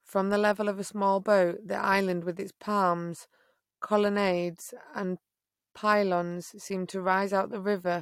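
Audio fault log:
Nothing stood out on listening to this speech recording.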